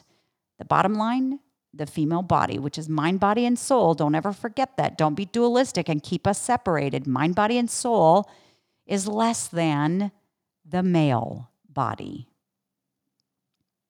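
Nothing technical goes wrong anywhere in this bit of speech; there's no fault to point to.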